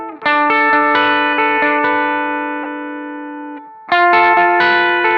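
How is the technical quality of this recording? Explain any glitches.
One glitch stands out: a short burst of noise, like a squeak or chirp, from 2.63 to 2.66 s. It is a corrupt frame decoded. Damaged bits in a couple of compressed frames reached the decoder, which played them anyway. Misread gains and codes put energy at frequencies where it doesn't belong, so the audio briefly turns to a synthetic blip. The burst peaks around -15 dBFS and lasts about as long as the damaged frames.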